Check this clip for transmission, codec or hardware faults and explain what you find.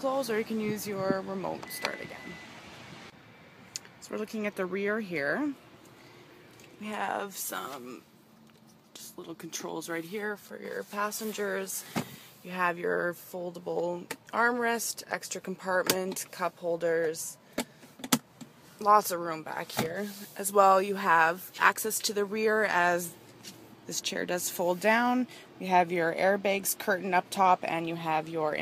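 Nothing in the transmission, codec or hardware path registers as a fault on this clip.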